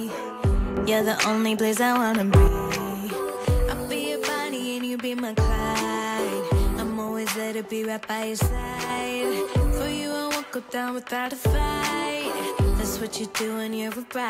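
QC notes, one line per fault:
0.77–2.48 s, sudden gain jump: level steps up about 6 dB at once and drops back at the end, noise floor rising with the sound; likely a gain setting applied without a ramp, unlike a compressor or fader move, which would glide.
8.47–8.90 s, sudden gain jump: level falls about 5 dB instantly, background dropping with it, then snaps back; an abrupt sample-to-sample step, not a gradual dip or a dropout.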